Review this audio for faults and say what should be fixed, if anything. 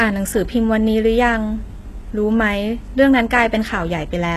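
Throughout the speech, s sounds are gritty and lispy, with nothing above 12.3 kHz. This is likely HE-AAC compression, which rebuilds treble from copied lower bands, pointing to a bitrate around 16 kbps. A spectrogram shows a hard ceiling over blocky, repeated-looking upper bands. Encode at a higher bitrate to prevent it.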